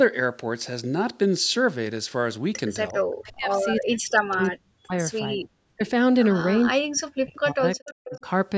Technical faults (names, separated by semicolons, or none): echo leak; speech suppressed in double talk